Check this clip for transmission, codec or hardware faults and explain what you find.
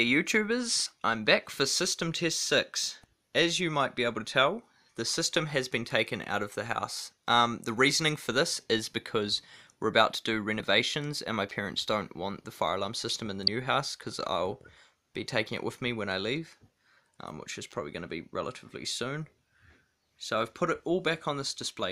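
There are two faults, both damaged data in a compressed stream, at 10.59 s and 13.47 s. At each point corrupted bytes make the decoder misread its frames and lose sync until it finds the next frame header. The result is a brief glitch, heard as a chirp, squawk, click or short hole, each under 20 ms.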